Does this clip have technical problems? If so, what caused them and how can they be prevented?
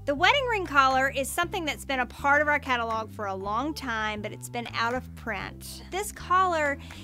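No, this clip has no technical problems, so there is nothing to prevent.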